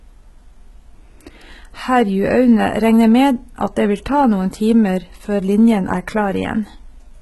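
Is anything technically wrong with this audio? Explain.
Yes. Throughout the speech, heavy damage points most likely to HE-AAC compression at a very low bitrate, around 16 kbps. The treble, cut off above 11.8 kHz, is rebuilt from copied lower bands, so sibilants sound gritty and metallic rather than dull, unlike a plain low-pass filter.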